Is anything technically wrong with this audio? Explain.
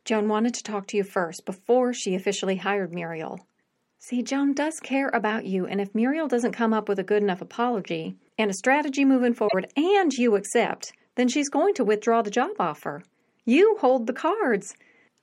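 Yes. A broken MP3 bit reservoir is likely at 9.47–9.54 s, between "and a strategy moving" and "and you accept then". The speech jumps ahead, and roughly three 26 ms frames after the cut, decoded from another frame's borrowed bytes, come out as a brief glitch.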